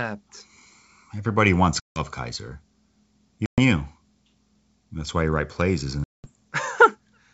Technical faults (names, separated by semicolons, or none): packet loss on an ADPCM call